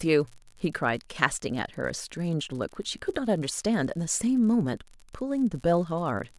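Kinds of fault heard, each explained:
Unreliable data bit: one line in the sample data is marginal, so its bit lands wrong in a random share of samples, and each slip adds a spike of the same fixed size, here a step of about -36 dBFS. Across the whole speech clip that shows up as a steady fizzy crackle riding under everything, and you can hear it carry on through the pauses, which is the giveaway that it isn't tied to the signal.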